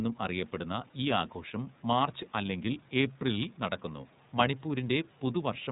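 A short speech clip that's been through the iLBC codec from start to finish, and the damage is plainly audible. Nothing comes through above 4 kHz, so it has that narrowband phone quality, and the voice sounds a bit rough and synthetic because each frame's excitation is coded on its own. The roughness fits 30 ms frames at around 13.3 kbps. The room noise sitting about 32 dB under the speech picks up the same coarse texture.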